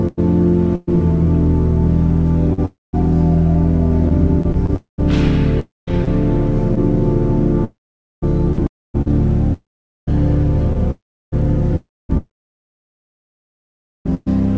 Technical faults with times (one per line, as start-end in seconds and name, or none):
0.02-14.28 sound chopped by the voice detector
4.76-5.00 long network dropout
5.60-5.89 long network dropout
7.64-8.24 long network dropout
8.67-8.96 long network dropout
9.53-10.09 long network dropout
10.91-11.34 long network dropout